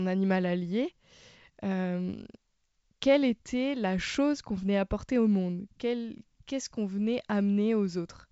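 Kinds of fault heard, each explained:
Nothing stood out on listening to this speech, carried over G.722 wideband telephone coding with its content ending at about 7.7 kHz.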